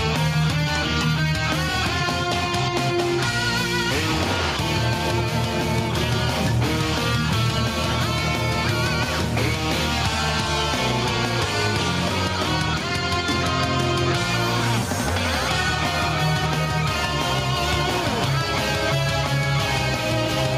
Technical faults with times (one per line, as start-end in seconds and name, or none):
none